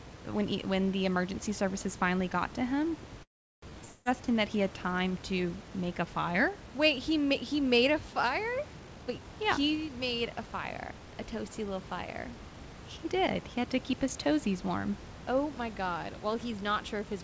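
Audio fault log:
3.23 to 3.71 s, call audio freeze: the sound stalls for about 0.4 s. A brief fading buzz carries the last sound for a moment, then there's roughly 0.36 s of near silence. It picks up exactly where it stopped, so nothing's lost, just a gap inserted. That's likely late packets draining the jitter buffer.
3.85 to 4.08 s, long network dropout: here the fade-out buzz fills about 0.2 s without ever dropping to silence, but when the sound returns about 0.21 s of it is simply gone, skipped over rather than delayed. That's likely a run of packets that never arrived at all.
8.80 to 11.14 s, jitter buffer speed-up: the sound runs at about 117% speed while the pitch stays put, so it comes across as hurried. The receiver is snipping out tiny pitch-period slices, roughly 0.4 s in total, to shed the extra delay that built up after the freeze.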